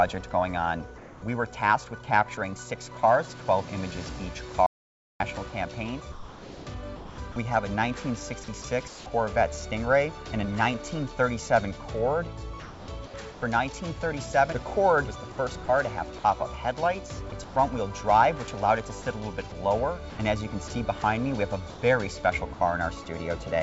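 From 0.98 to 1.22 s, the background becomes steady, featureless noise at the same level. This is comfort noise in place of the background, likely from a sender pausing transmission.

At 4.66 s the sound cuts to total silence for 0.54 s, with no room tone. This audio dropout to silence likely comes from lost input.

From 6.12 to 9.06 s, the sound is chopped by the voice detector. About 1.04 s of sound is likely swapped for synthetic noise.

The same choppy switching returns from 12.60 to 13.42 s, with about 0.46 s replaced. It likely comes from the detector toggling.

From 15.32 to 17.56 s, about 0.28 s is likely filled with comfort noise.

From 19.02 to 22.60 s, about 0.32 s is likely filled the same way.

Throughout, the call path leaves nothing above 8 kHz.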